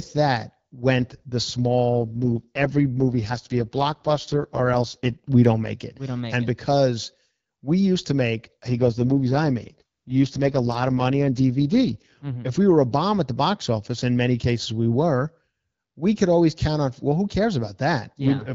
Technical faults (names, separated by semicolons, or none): AMR rate drop